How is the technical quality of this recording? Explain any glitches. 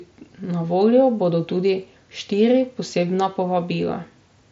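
No glitches turn up in this speech recording. It has the band-limited sound of a Bluetooth mSBC headset link, with nothing above about 7.7 kHz and only the light graininess that codec leaves on louder sounds.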